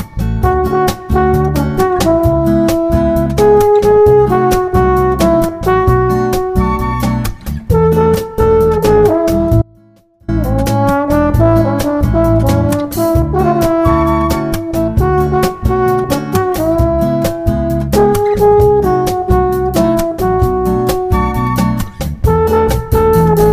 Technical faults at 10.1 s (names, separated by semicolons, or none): audio dropout to a faint residue